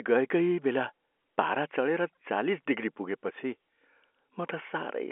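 Speech carried over G.711 telephone coding, held to the usual narrow phone band, with nothing technically wrong with it.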